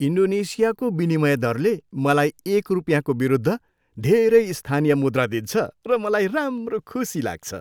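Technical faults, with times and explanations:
1.12 s and 6.58 s, dropped samples: two single sharp clicks in the speech, each likely from a handful of samples missing from the stream, well under a millisecond. The waveform jumps abruptly to a later value, producing a brief broadband tick rather than any audible gap.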